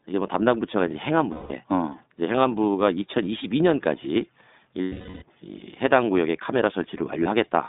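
Throughout, the speech sounds narrow, slightly rough and synthetic, with nothing above about 3.7 kHz or below 200 Hz: iLBC codec coding in 20 ms frames, which fits its 15.2 kbps mode. From 1.32 to 1.52 s, 4.82 to 5.23 s and at 7.24 s, lost iLBC frames turn into a held, buzzy or breathy vowel lasting 180 ms, 400 ms and 20 ms respectively. The decoder repeats the last pitch cycle with noise, fading across the longest gap, and speech recovers almost immediately.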